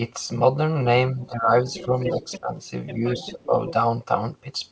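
From 1.14 to 1.67 s the speech dips by roughly 10 dB in short bursts totalling around 300 ms. This is speech suppressed in double talk, likely caused by the echo canceller failing to separate the talker from loudspeaker echo while both sides spoke, so it turned everything down. The same ducking returns at 1.86 to 1.95 s (about 10 dB), 2.15 to 2.51 s (about 15 dB, the deepest) and 3.18 to 3.53 s (only about 5 dB). What marks it is that the main talker gets quieter or breaks up, with nothing added.

The other side's voice leaking through does the opposite: a second voice is added to the recording. It is likely a residue of loudspeaker playback that the echo canceller left in the microphone signal. A faint scrap, far below the speech, appears at 1.22 to 1.28 s. A strong stretch at 1.73 to 2.40 s sits only about 10 dB under the talker and overlaps the dips at 1.86 and 2.15 s. A quieter run follows at 2.87 to 3.46 s, and a brief fragment at 3.67 to 3.73 s.

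Throughout, the band stops at 8 kHz, as expected from the call's G.722 path at what fits a 64 kbps stream.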